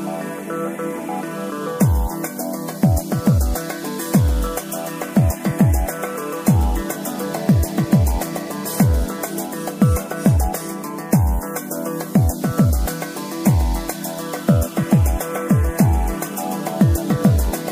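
Listening closely, nothing in the audio stood out as a technical problem.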